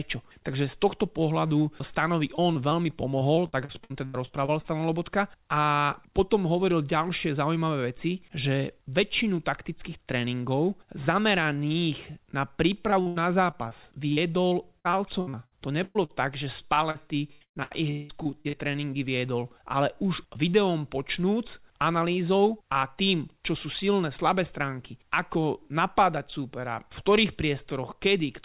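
Repeated packet loss (robotic sound) hits this speech at 2.36–4.66 s and again at 12.90–18.55 s, from just after "na príp" to just before "tréningy viedol ale už". Over those stretches packets kept going missing. Each hole, up to 80 ms in the first stretch and 185 ms in the second, was papered over by stretching the preceding sound, covering about a fifth of each span. The result is choppy, with pieces missing. The call path cuts everything above 4 kHz, which fits a G.711 A-law link.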